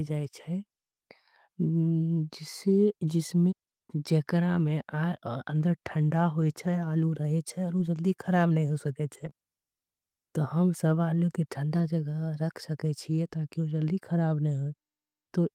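At 6.41–6.43 s, 7.77 s, 9.13–9.27 s and 11.75–11.81 s, lost packets were rebuilt from error correction: low-bitrate copies fill the gaps, sounding briefly rougher and noisier. From 9.29 to 9.33 s, short concealed packet loss extends the preceding sound for 20 ms, a brief smear.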